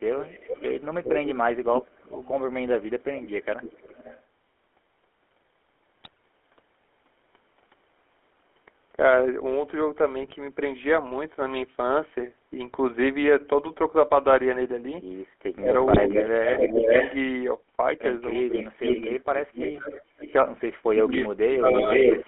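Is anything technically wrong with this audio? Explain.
Yes, there are four problems.

Throughout, the speech has passed through the GSM full-rate codec, which rebuilds the voice from a vocal-tract model driven by sparse pulses. The band is 300 Hz to 3.4 kHz, fitting a 13 kbps phone channel, and the damage is plainly audible as a buzzy, gravelly roughness with no high end.

Echo leak, likely from a far-end loudspeaker whose echo canceller let some of its own microphone pickup return down the line, appears from 0.2 to 4.23 s, 18.57 to 20.32 s and 21.22 to 22.28 s. A delayed copy of the voice trails by about 0.40, 0.46 and 0.46 s. It sits well below the speech at first, is closer in level the second time, and by the end is louder than the speech itself.

GSM bit errors hit at 6.01 to 6.17 s, 10.21 to 10.33 s and 15.90 to 15.99 s. Corrupted bits reached the decoder at an error rate of about 1.2 to 1.4 percent, garbling its filter, pitch and gain values, so the voice briefly bursts into squawks, pops and gargling.

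Speech suppressed in double talk occurs at 15.57 to 16.93 s, 18.45 to 18.82 s, 20.15 to 20.26 s and 21.01 to 22.23 s. This is likely an echo canceller that could not separate the talker from the loudspeaker echo while both sides spoke, so it pulled both down. The voice dips by roughly 10 dB at first, then drops out almost entirely in pieces.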